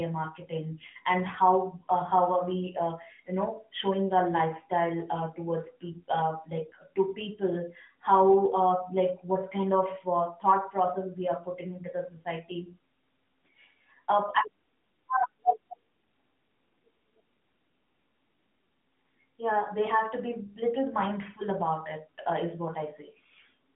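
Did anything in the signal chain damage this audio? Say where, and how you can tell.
No, no stage in the chain damaged this audio.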